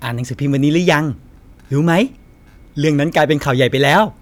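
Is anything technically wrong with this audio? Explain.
Yes. Hard clipping from 3.17 to 4.02 s: the speech exceeds a stage's limit by about 4 dB, flattening peaks into high harmonics heard as crackle on loud syllables.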